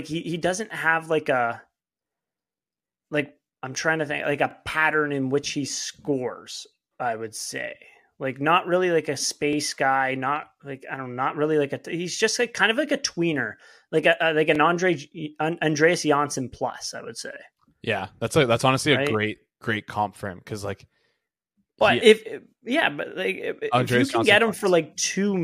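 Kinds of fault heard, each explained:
Overlapping chunks: The speech was handled in 5.0 s blocks, each starting about 23 ms before the previous one finished, so that sliver plays twice at every join. It is heard as a brief stutter or click at 4.51, 9.53, 14.55, 19.58 and 24.6 s. A waveform shows a small repeated segment with a discontinuity at each seam, and a spectrogram shows thin vertical broadband lines spaced about 5 s apart.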